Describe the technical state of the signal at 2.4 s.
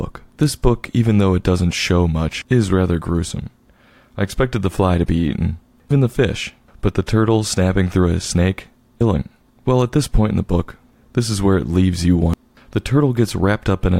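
At 2.42 to 2.45 s, just before "is rather gruesome", damaged data in a compressed stream breaks up the signal for about 30 ms. The decoder misreads corrupted frames and resyncs, producing a brief chirp, squawk, click or short hole.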